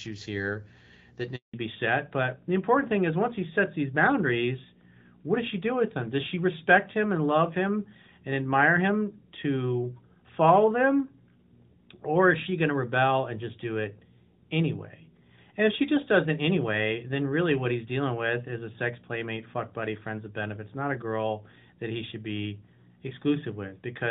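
A speech recording that suffers a handover gap just after "here that": from 1.36 to 1.54 s the audio fades out within a few tens of milliseconds and stays silent for 180 ms while the call switches networks and no frames arrive. The waveform shows a flat line, and the spectrogram a blank vertical strip. From 1.54 s to the end there is a fallback to narrowband. Everything above 4 kHz disappears, leaving the sound duller and rougher. This points to a drop from HD Voice AMR-WB, around 12.65 kbit/s, to narrowband AMR-NB, and the spectrogram shows a hard horizontal ceiling at 4 kHz with empty space above it.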